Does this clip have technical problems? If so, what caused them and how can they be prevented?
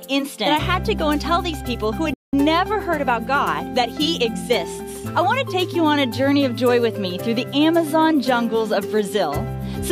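Yes, there's one clear playback stall. At 2.14 s the sound just stops dead and stays silent until about 2.33 s, a gap of roughly 190 ms, then carries on. That's most likely the player starving for data or its audio thread getting blocked for a moment, so nothing reached the output until it caught up. A larger playback buffer and keeping the audio thread free of blocking work like disk or network calls should stop it recurring.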